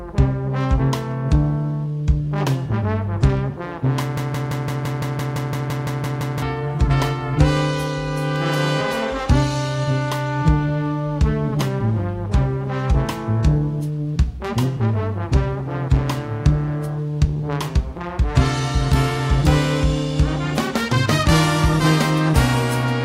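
From 4.17 s to 6.42 s the audio sticks in a broken-record loop: one fragment of about 170 ms repeats back to back 13 times, and the material that belonged there never plays. The player, encoder or stream likely stalled and kept resending its last buffered piece.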